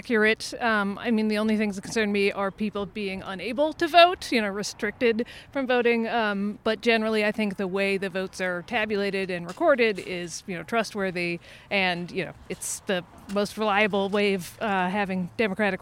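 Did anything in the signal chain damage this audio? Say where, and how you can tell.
Yes. Sample clock jitter runs from 7.00 to 9.46 s, in the converter. Its clock wanders by around a microsecond, so samples land early or late. Steep, bright passages gain a rough hiss that tracks the waveform's slope, roughly 40 dB below the signal.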